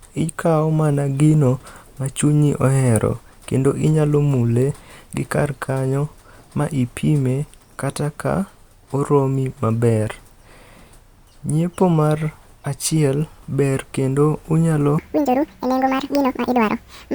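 From 14.98 s, after "achiel ber kendo unyalo", speech races twice as fast, about ten semitones higher: a section at the wrong speed, likely mis-clocked.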